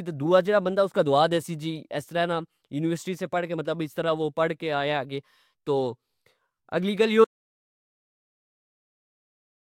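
At 7.25 s the speech cuts off into dead silence with no room tone, lasting to the end: an audio dropout to silence, likely from lost input.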